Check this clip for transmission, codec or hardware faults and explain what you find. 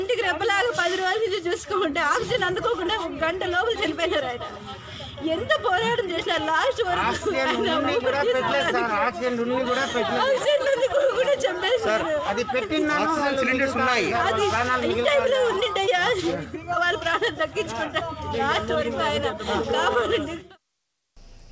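Nothing here sounds wrong; the audio has simply come through a call path with no content above 8 kHz, which fits a wideband call codec such as G.722.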